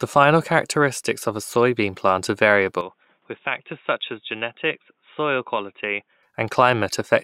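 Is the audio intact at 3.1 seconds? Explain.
No. An input switched to a poorer device runs from 2.81 to 6.23 s, right after "a soybean plant are", likely from recording moving to another microphone. With no gap at the switch, the speech turns dull, losing everything above 3.8 kHz, drops about 5 dB, and gains faint new background noise.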